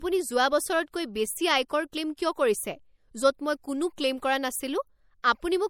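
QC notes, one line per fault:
Throughout: low-bitrate audio saved at a high bitrate. The speech has nothing above about 19.4 kHz and carries the smeared, coarse texture of heavy MP3 coding. That points to a likely chain of an MP3 at around 64 kbit/s re-encoded as MP3 at around 320 kbit/s. The second pass keeps the file large but cannot rebuild detail the first encoder discarded, so those artefacts remain and the higher rate adds almost nothing.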